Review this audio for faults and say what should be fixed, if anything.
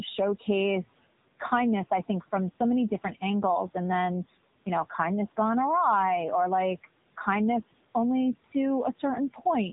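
The AMR narrowband mobile codec damage is plainly audible through the whole clip. Nothing passes above about 3.8 kHz, so the speech sounds boxed in and phone-like. The codec rebuilds each 20 ms frame from a vocal-tract model driven by a few pulses. At this low rate that leaves a buzzy, synthetic edge on the voice. The room noise sits about 22 dB below the speech, and it warbles through the codec. The degree of damage fits the 7.95 kbps mode. To prevent it, capture or transmit over a wideband path at a higher bitrate.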